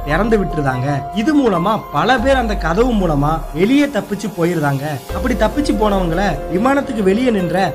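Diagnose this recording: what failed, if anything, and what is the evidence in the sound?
Nothing in the recording points to a failure at any stage of the chain. No event in the audio calls for a diagnosis.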